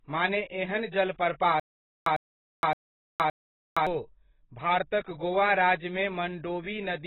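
A speech clip with heavy AAC compression throughout, likely from a very low bitrate around 16 kbps. The spectrogram shows nothing above 4 kHz and patchy, smeared bands beneath. From 1.60 to 3.87 s there is a stutter with silent gaps: a 101 ms fragment repeats four times every 568 ms, with 466 ms of flat digital silence between bursts on the waveform, likely from a stalled stream replaying its last buffer.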